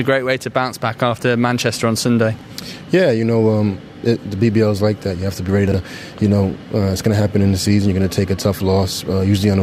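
At 2.39 s and again at 5.68 s the audio briefly jumbles, the sign of chunks out of order. Blocks of about 21.33 ms play in the wrong sequence. The first is one chunk late (2.39 to 2.43 s). The second is two chunks late (5.68 to 5.74 s). On a spectrogram each join shows as a thin vertical broadband stripe, and tonal traces step abruptly; the waveform shows sudden discontinuities.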